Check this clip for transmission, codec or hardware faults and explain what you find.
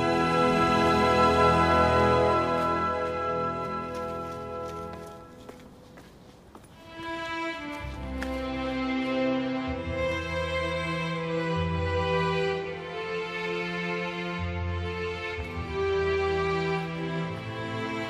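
There is one codec fault, a case of compressed frames skipped. At 3.65 to 3.67 s, about one frame of the encoded stream never plays. It was missing or rejected by the decoder as damaged. The audio jumps ahead by roughly 50 ms, which fits a 46.4 ms frame.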